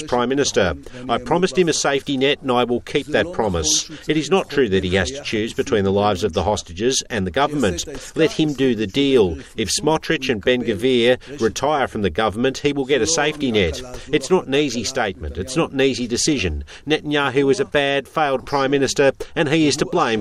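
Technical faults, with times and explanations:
No technical faults, with times and explanations, to report.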